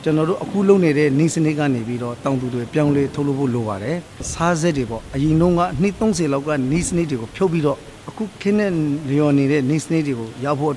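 No dropouts, clicks, distortion or other transport or processing faults are audible anywhere in the clip.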